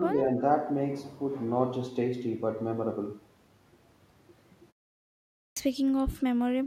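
In the first 0.16 s the speech dips briefly, by roughly 5 dB at its deepest, and only for around 50 ms in total. This is likely speech suppressed in double talk: the echo canceller, hearing the far side at the same moment, could not tell this talker from loudspeaker echo and pulled the level down. Unlike a gate closing in silence, the dip falls on active speech while the other side is talking.

At 5.49 s, after a 0.85 s pause, speech resumes with a clipped start after a pause. The output device had gone idle in the silence and took time to wake, so about 75 ms of the onset is missing, until 5.57 s. The word begins abruptly, without its first sounds.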